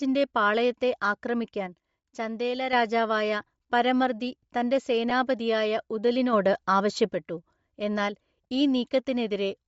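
Bluetooth LC3 compression runs throughout: a grainy, breathy edge on the speech, with the upper band partly replaced by noise. This is likely a transform codec at a low bitrate, fitting about 32 kbps in 10 ms frames.

A sudden gain jump at 1.67 s drops speech and background together by about 6 dB until 2.73 s. A second at 6.33 s raises them by about 6 dB until 7.14 s. Each is likely a gain change applied without a ramp.

Lost LE Audio frames at 5.10 s cause a brief noisy smear, consistent with one missing 10 ms frame that the decoder filled with a sign-scrambled copy of the previous spectrum.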